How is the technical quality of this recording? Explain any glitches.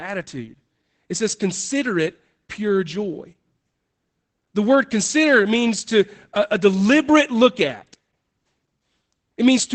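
The recording is held back by Opus voice compression, plainly audible for the whole clip.

Opus voice compression: from start to finish the speech is band-limited, with nothing above about 8.7 kHz, which fits Opus running its SILK speech coder in wideband mode at a low rate, around 12 kbps. SILK models the voice with linear prediction and codes the excitation coarsely, so the speech sounds muffled, slightly hoarse and faintly robotic. A simple low-pass filter would dull the top without that grainy, synthetic texture.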